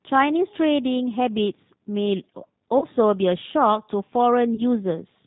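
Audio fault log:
throughout: G.729 codec. The speech is carried at 8 kbit/s, where the decoder rebuilds each 10 ms frame from a vocal tract filter, a pitch predictor and a sparse set of pulses rather than from the waveform itself. Nothing above 4 kHz survives, so sibilants and breathy detail are gone, and the coarse pulse excitation gives the voice a plainly audible rough, slightly synthetic edge.
2.79–2.86 s and 4.55–4.63 s: VoIP packet loss concealed by the speech codec. Each time, about 30 ms of audio went missing, which fits a single lost packet, and the decoder filled the gap by repeating its last pitch and filter settings at falling gain. The speech smears into a brief buzzy tone or coloured noise that fades, and because each frame depends on the one before, the voice stays weakened or distorted for roughly 70 to 80 ms in all.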